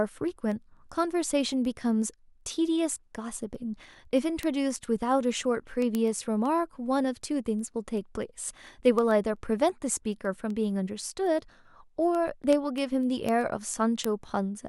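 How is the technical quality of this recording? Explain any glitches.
The recording has a clocking fault that runs through the whole speech clip.

Word clock ticks are present from 0.14 s to 14.68 s. They recur roughly every 0.15 s, around a hundred in all. The receiving device is running on its own clock instead of locking to the sender's. The two clocks drift apart at something like 150 parts per million. At each slip, a single sample is dropped or repeated. The result is a sharp tick of uneven strength at a steady rate under the speech.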